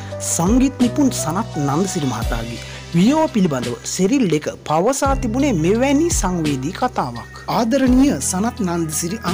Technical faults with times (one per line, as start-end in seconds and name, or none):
0.00-9.34 hard clipping